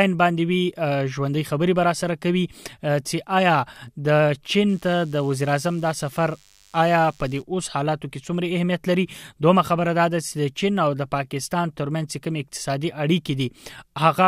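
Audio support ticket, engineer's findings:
DECT cordless phone buzz, 4.69 to 7.42 s. Thin, steady 100 Hz buzz with dense harmonics, roughly 35 dB below the signal. Nearby DECT handset or base pulsing every 10 ms, rectified in the audio circuit. Unlike mains hum: not sinusoidal.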